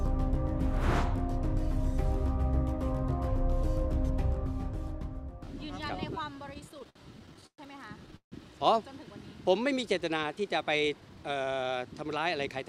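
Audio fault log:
6.49–7.60 s, repeated stalls (stutter): fifteen short gaps, the longest 118 ms, filled from the last sound; late packets kept draining the jitter buffer, so it drags.
8.16–8.34 s, call audio freeze: the sound holds and fades into about 110 ms of silence, likely from packets held up emptying the buffer, adding a 154 ms gap.
10.30–11.31 s, jitter buffer speed-up: plays at 111% speed with pitch unchanged, as the receiver trims roughly a tenth of a second of pitch periods to shed excess delay.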